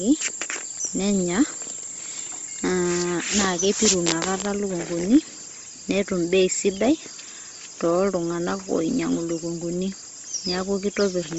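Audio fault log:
Throughout, likely Bluetooth LC3 compression: heavily coded speech with nothing above about 7.7 kHz, upper band noise-filled, giving a breathy, grainy edge consistent with 7.5 ms frames near 24 kbps.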